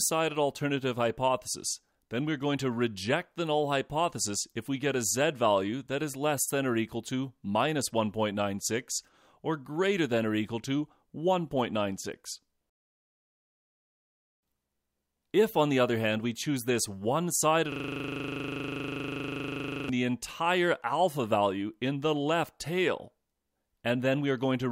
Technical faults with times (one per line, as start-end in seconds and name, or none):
17.72-19.89 system hang loop